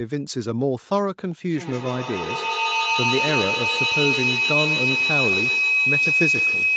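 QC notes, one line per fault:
1.5 s to the end, feedback howl: two devices on the call share a room, so sound loops from loudspeaker to microphone and gains level on every trip. Instead of dying away, the repeats grow and narrow to a tone near 3 kHz, peaking about 3 dB above the speech and pulsing roughly every 150 ms. A spectrogram shows a bright horizontal band near 3 kHz, well inside the 8 kHz call bandwidth. The waveform envelope swells in regular beats until the clip ends.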